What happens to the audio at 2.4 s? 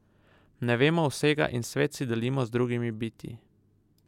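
Nothing goes wrong at 2.4 s; the speech carries on intact through that moment, with no dropout, click or distortion to be heard.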